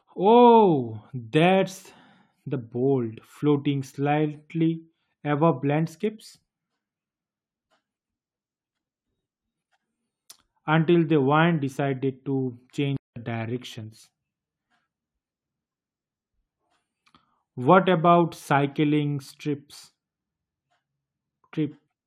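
The clip is speech with a playback stall. At 12.97 s, just after "the wind decided to", the sound stops dead in mid-flow. Silence holds until 13.16 s, a gap of 195 ms. Then the audio resumes. The break is abrupt rather than a fade, and it lands inside a phrase, not at a natural pause. The likely cause is the player running short of data, or its playback thread being blocked briefly.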